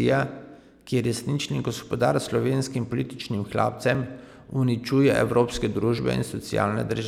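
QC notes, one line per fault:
3.95 s and 5.99 s, dropped buffer (overrun): At each point the speech jumps forward with no gap of silence. The first skip is tiny, roughly 5 ms. The second loses roughly 20 ms. The likely cause is audio not being read out in time, so a stretch was overwritten and the two sides were butted together.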